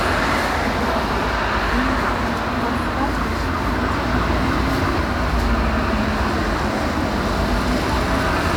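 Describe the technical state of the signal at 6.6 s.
At 6.6 s the signal is intact, with no audible technical fault at that moment.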